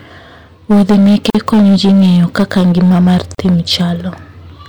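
Hard clipping runs through the whole speech clip: overdriven by about 11 dB, roughly a sixth of samples hit the ceiling, producing constant harsh fuzz on loud syllables. A gap at a join of encoded pieces opens at 1.30–1.35 s (45 ms) and again at 3.35–3.38 s (38 ms), two seconds apart. These are untrimmed encoder delay and padding, heard as abrupt dropouts before the sound resumes.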